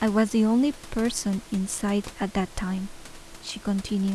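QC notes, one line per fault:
No faults heard in this speech recording.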